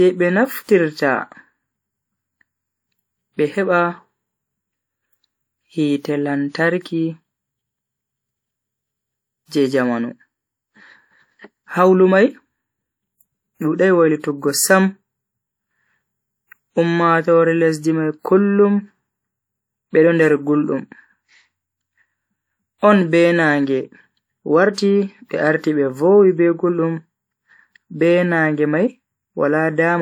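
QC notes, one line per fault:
9.46 to 9.52 s, pre-echo: about 59 ms of hiss runs ahead of a sharp speech onset, so the attack arrives softened and smeared rather than crisp. The codec spread its quantisation noise across the whole transform block, and the noise sized for the loud onset also filled the quiet stretch before it. On a spectrogram this shows as a broadband haze starting before the onset's vertical edge; the waveform shows low-level fuzz where near-silence should be.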